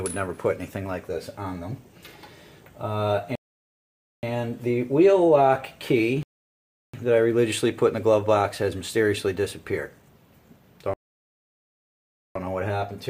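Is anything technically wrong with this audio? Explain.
Yes. Rebuffering stalls occur at 3.35 to 4.23 s, 6.23 to 6.94 s and 10.94 to 12.36 s, adding 0.88 s, 0.71 s and 1.42 s of silence. Playback exhausted its downloaded audio and halted until more arrived. The sound drops out, then continues exactly where it paused, with nothing missing.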